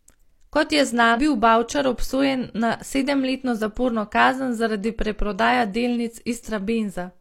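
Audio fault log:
1.12–1.18 s, damaged data in a compressed stream: a short stretch of the encoded speech arrives corrupted, so the decoder misreads those frames, loses sync and hunts for the next valid frame header, leaving a brief glitch of about 70 ms.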